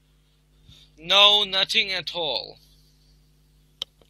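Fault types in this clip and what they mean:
Sample clock jitter: the converter's timing wanders by a couple of microseconds, so each sample lands slightly off its intended instant, and the error grows wherever the speech waveform changes fastest. Throughout the clip this adds a grainy hiss roughly 30 dB below the speech, strongest on loud and bright sounds such as sibilants. Unlike a steady noise floor or dither hiss, it follows the signal and disappears entirely in the pauses.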